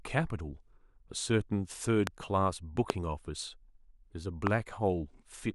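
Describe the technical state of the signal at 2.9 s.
At 2.90 to 2.92 s a single loud pop sits about 20 dB above the speech, likely a voltage step from a plug, switch or static discharge.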